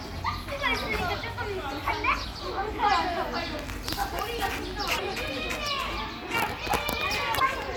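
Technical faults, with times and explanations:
2.21–2.25 s, 4.95–5.00 s and 7.36–7.40 s, damaged data in a compressed stream: each burst of corrupt bytes makes the decoder misread frames and hunt for sync, producing a brief chirp, squawk, click or short hole.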